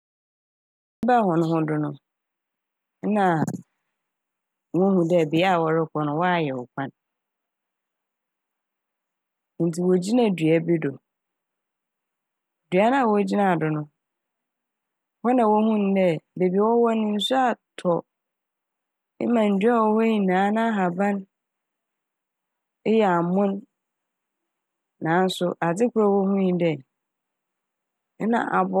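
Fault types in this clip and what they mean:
Cut-off start: the recording or stream was already running before capture began, so the first 1.03 s is digital silence and the speech then arrives abruptly at 1.03 s, partway through a sound rather than at its beginning. There is no natural onset or fade-in; the waveform jumps from silence straight into mid-utterance level, which the ear hears as a hard edge and a truncated first syllable, the sign that the start of the material was lost.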